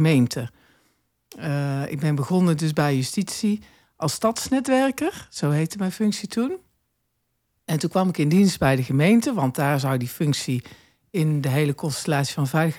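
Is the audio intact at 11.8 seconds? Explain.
Yes, at 11.8 seconds the speech plays through intact, with no audible fault at that moment.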